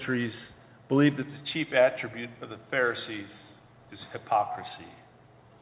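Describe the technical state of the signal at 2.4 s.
At 2.4 s the signal is intact, with no dropout, glitch or other fault, only the narrow band of the call path, which carries nothing above 4 kHz.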